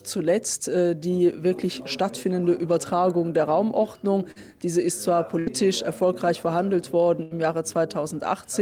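At 4.31 s there is a short concealed packet loss. About 40 ms of audio never arrived, and the receiver covered it with roughly 41 ms extrapolated from the preceding sound before blending back by 4.53 s. It is heard as a brief smear or wobble.

Bursts of packet loss follow at 5.39 to 5.50 s and 7.23 to 7.34 s, each dropping about 80 ms. Concealment stretches the last sound for 74 and 81 ms respectively, fading into a held buzz or hiss, and the audio then resumes with material missing.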